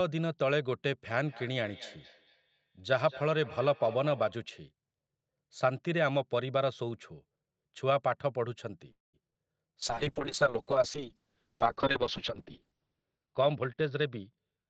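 From 1.13 to 4.46 s there's feedback echo between two devices. A second device in the room is replaying the call, and this mic picks it up again. Each bit of sound comes back roughly every fifth of a second, peaking about 18 dB under the speech and turning thin and ringy.

At 8.91 to 9.15 s there's a call audio freeze, likely from packets getting held up so the jitter buffer ran dry. The last sound is stretched into a fading buzz or hiss and then about 160 ms of silence. Afterwards the audio picks up where it left off, so nothing is lost, but it now runs about 0.22 s later.

Right after that, at 9.27 to 9.36 s, come three back-to-back short concealed packet losses, each dropping 20 ms. The receiver patches each gap by extending the previous sound, which gives a quick smeared wobble.

From 9.84 s to the end there's a call bitrate drop. The bandwidth estimate fell and Opus went from 48 kbps down to 6 kbps, staying at the bottom for about 2.9 s. 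The top end also shrinks from 8 kHz to 6 kHz, so the sound gets rough, watery and muffled.

Inside that stretch, from 13.33 to 14.67 s, there's a jitter buffer speed-up. The buffer had built up extra audio and trimmed about a fifth of a second by cutting out tiny pitch-period chunks. Playback runs at about 115% with the pitch unchanged, so it sounds hurried.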